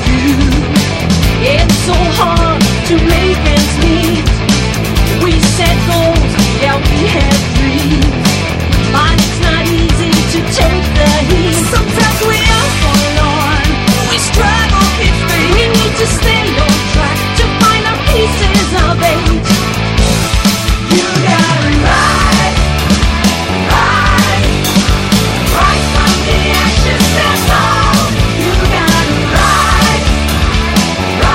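A regular click or pop recurs throughout the audio, roughly every 3.18 s from 1.93 s to 30.52 s, about ten in all. This is the pattern of clock drift buffer slips. The likely cause is two devices running on separate clocks that disagree by something like a hundred parts per million, so a buffer between them gradually drifts until a small block of samples, on the order of fifteen, is dropped or repeated. On a spectrogram each slip shows as a thin vertical broadband line at evenly spaced intervals. On the waveform it appears as a tiny step or discontinuity.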